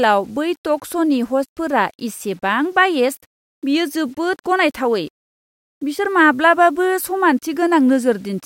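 Throughout the speech, grainy distortion tracks the signal at roughly 40 dB down, likely low bit depth without dither (fits 8-bit rounding): stepped waveform, signal-following spectral haze.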